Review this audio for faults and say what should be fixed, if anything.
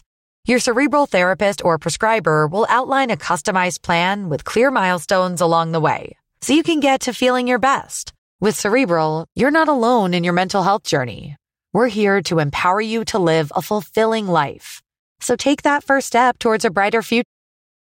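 Nothing needs fixing; no faults can be heard.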